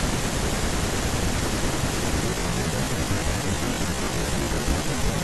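From 2.24 s to the end, the speech abruptly slows to about 0.56 times its pace while the pitch holds steady, so it drags. This is a time-stretched section, likely from software lengthening the audio by repeating short pieces.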